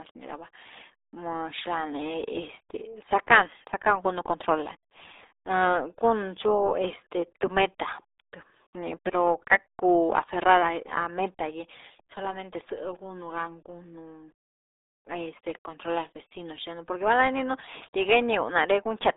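RealAudio 14.4 codec damage runs from start to finish. The speech is squeezed into a band of roughly 300 Hz to 3.7 kHz with nothing above 3.8 kHz, and heavy coding leaves it muffled and gargly, which fits a dial-up-era codec at about 8 kbit/s.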